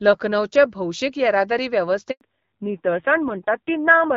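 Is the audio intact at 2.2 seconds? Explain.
No. A handover gap runs from 2.11 to 2.21 s, just after "लखनौचे भौशीक येरादारी": while the call switched networks, no speech frames arrived, so the sound dies out almost at once and 100 ms of what was said is simply missing.

A fallback to narrowband follows at 2.21 s and lasts to the end. The new link carries a narrowband codec instead of HD Voice, so nothing remains above 4 kHz. The sound turns dull and rougher, which fits a low-rate mode around 5.9 kbit/s.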